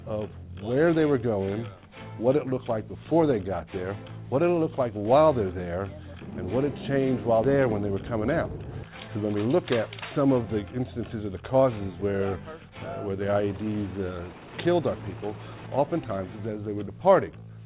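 A skip ahead at 7.44 s jumps playback forward with no gap filling the cut. Roughly 300 ms of audio was discarded, probably when the jitter buffer overflowed while later packets were already queued, so the sound on either side of the jump is joined almost directly.

A jitter buffer speed-up runs from 7.53 s to 9.41 s. The receiver trimmed short pitch-period-sized pieces again and again, about 150 ms in total, to drain its excess delay. Playback runs 6% fast at unchanged pitch and sounds slightly hurried. Throughout the clip, the call codec leaves nothing above 4 kHz, a narrowband character that fits G.711 mu-law.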